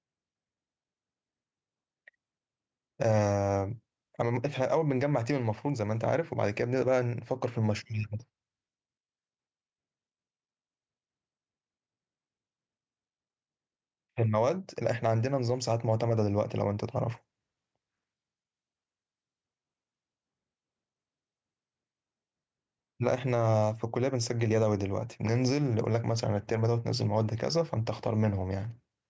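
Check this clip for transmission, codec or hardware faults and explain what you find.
There's one fault here, gain pumping, running through the whole clip. The gain swings by around 5 dB, pulled down under each loud stretch of speech, leaving everything squashed. That's likely a far-too-high mic gain with a fast limiter clamping down on every peak. The call's microphone processing, which tops out at 8 kHz, isn't a fault.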